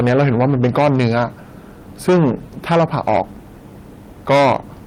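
A stage in the chain received more level than it could pass, so the peaks of this speech clip were cut flat, which is hard clipping. The flattened tops add harmonics far up the spectrum, giving a harsh fuzz on loud sounds. It runs from 0.00 to 1.24 s (about 8 dB over), 2.08 to 2.31 s and 2.71 to 3.21 s (about 10 dB), and 4.30 to 4.56 s, where an overload of about 15 dB is harshest.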